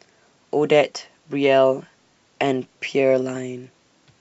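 Speech recording, no technical faults detected.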